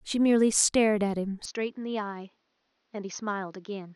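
From 1.45 s to the end, the speech drops roughly 10 dB and dulls above 6.5 kHz, with no gap. That's likely the input switching to a poorer device.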